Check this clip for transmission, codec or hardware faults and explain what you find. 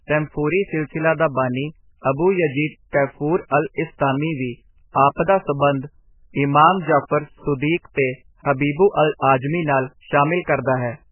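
The speech carries one codec fault, present from start to finish. It sounds like heavy MP3 compression, likely at a very low bitrate, around 8 kbps. Nothing survives above 3 kHz. Weak frequency lines flicker between frames, so the speech turns watery and swirly, with smeared onsets and chirpy s sounds.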